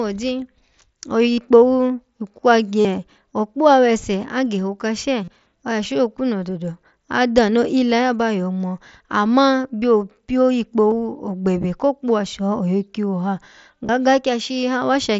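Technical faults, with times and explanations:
1.33, 2.81, 5.24 (just before "oya shokunu dodo adano"), 10.91 (after "ngino amma byo pyo") and 13.86 s (after "she oyo kiwo ha"): concealed Bluetooth headset packet loss. Gaps of 15 to 53 ms are filled by repeating recent waveform, giving brief buzzy patches with a slight warble on recovery.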